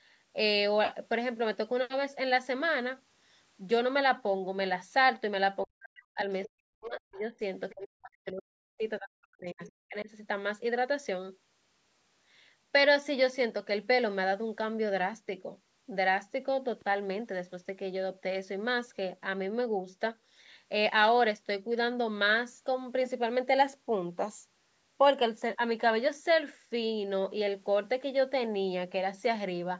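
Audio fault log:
5.64–6.19 s, 6.47–7.41 s, 7.72–8.83 s, 8.99–10.09 s: speech suppressed in double talk. The talker's speech sinks by as much as about 40 dB, likely because the echo canceller could not separate near and far talkers. On a spectrogram the harmonics fade into gaps, and the waveform envelope collapses into holes.
6.20–6.24 s and 9.66–9.70 s: other side's voice leaking through. Brief scraps of a second voice appear about 35 dB and about 25 dB below the speech, likely residual loudspeaker echo the canceller missed. They show as faint, short smudges of energy unrelated to the main harmonics.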